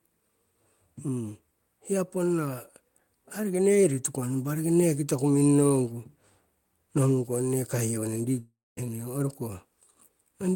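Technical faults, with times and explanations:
8.39 to 8.79 s, long network dropout: the speech breaks off and the last sound carries on as a decaying buzz that fades into about 0.22 s of near-silence before the talker resumes. Roughly 0.38 s of speech is simply gone, so the audio picks up later than where it stopped. This is likely a stalled packet stream: the receiver extrapolated from its final good audio until the concealment faded to nothing, then resumed with whatever arrived next.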